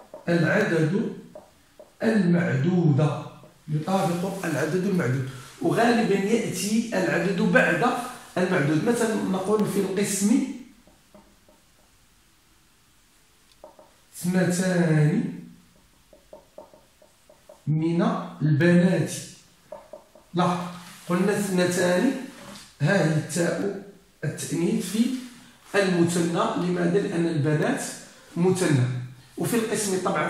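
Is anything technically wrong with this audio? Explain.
Yes. From 0.61 s to 29.62 s, around thirty ticks recur exactly once per second. These are periodic USB or driver dropouts: something stalls the USB bus or audio driver on a one-second cycle, and each stall replaces a tiny fraction of a millisecond of sound with silence.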